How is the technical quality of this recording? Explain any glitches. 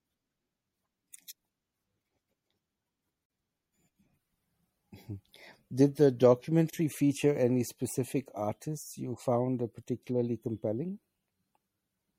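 The speech has plainly audible codec damage throughout, plus two short dropouts where the sound briefly goes silent.

The whole clip has a watery, swirly character, with chirpy, metallic edges on s sounds and softened consonant attacks. That's likely MP3 compression at a fairly low bitrate, something like 64 kbps. When bits run short, the encoder chops off the treble and throws away quiet frequency detail, and that detail flickers in and out from frame to frame, which is where the swirl comes from.

There are also two gaps at a join of encoded pieces. The first runs from 3.26 to 3.30 s, about 44 ms of silence. The second runs from 6.70 to 6.73 s, about 31 ms, just before "feature any specific artists". Each separately encoded piece carries the encoder's startup silence and its end padding, and those weren't trimmed when the pieces were joined. You hear a sudden hole with smeared edges, then the speech picks up right where it stopped.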